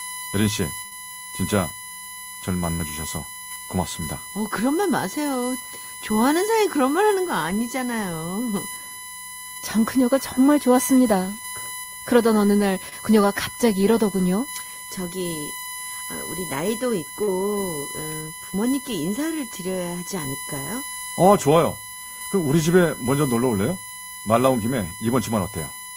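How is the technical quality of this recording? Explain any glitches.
The recording has audible problems: a steady electrical whine and several dropouts.

A USB whine runs throughout. Bus frames leak through power or ground as a fixed 1 kHz series, strongest at 11 kHz and roughly 15 dB below the speech. Its rigid pitch sets it apart from mains hum.

Bursts of packet loss occur at 0.85 to 0.93 s and 2.73 to 2.81 s. About 60 ms of speech is missing each time. The receiver extends the last sound as a fading buzz or hiss, then jumps ahead.

Short concealed packet loss occurs at 12.89 s and 17.23 s, with 20 ms and 40 ms lost. These are brief smears blended back quickly, shorter than the bursts.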